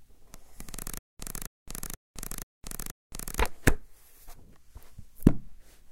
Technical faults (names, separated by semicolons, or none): stutter with silent gaps